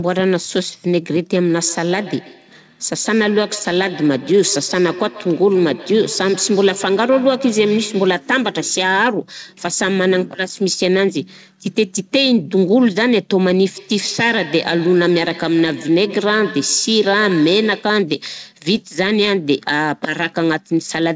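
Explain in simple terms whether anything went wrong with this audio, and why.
Two things went wrong. The first is feedback echo between two devices. From 1.54 to 8.27 s, and again from 13.76 to 18.06 s, the speech comes back as a quiet, thin, ringing repeat roughly every 150 ms. Two devices on the same call were probably in one room. One played the other's sound, and that microphone picked it up again.

The second is bit errors on an ADPCM link. There is a short pop with a rough crackle at 3.72 s, and a bigger one at 18.77 s. A few bits were corrupted in transmission. That threw the decoder off for a few milliseconds.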